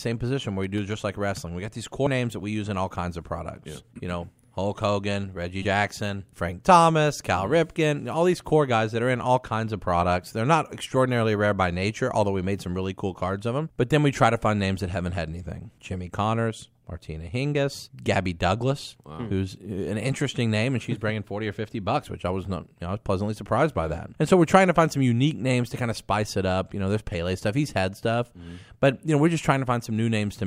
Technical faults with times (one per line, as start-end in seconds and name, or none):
2.06 damaged data in a compressed stream
5.61-5.65 damaged data in a compressed stream